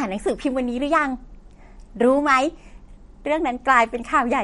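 Throughout the speech, the treble stops dead at 11.2 kHz, and what remains swirls and sounds watery, with metallic chirps on s sounds. This is likely MP3 compression at a low bitrate, near 47 kbps. Unlike a simple low-pass filter, which only dulls, weak frequency lines flicker between frames.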